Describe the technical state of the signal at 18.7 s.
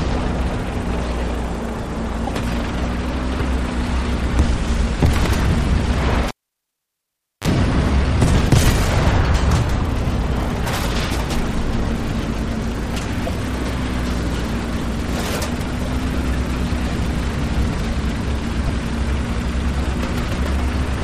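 At 18.67 to 18.70 s the MP3 stream likely lost frames, breaking the bit reservoir. The frame after the gap reaches back into earlier frames for its borrowed data and decodes bytes that belong to a different frame. The audio skips forward, and the first frame or so after the cut comes out garbled, a 30 ms disturbance, roughly one frame long, which fits MP3 frames of about 26 ms.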